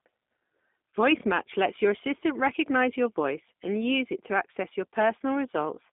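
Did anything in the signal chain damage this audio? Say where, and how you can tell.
Yes, at the codec stage: G.729 coding throughout, speech rough and synthetic from sparse-pulse rebuilding, fitting 8 kbit/s. Spectrogram shows energy only within 200 Hz to 3.6 kHz.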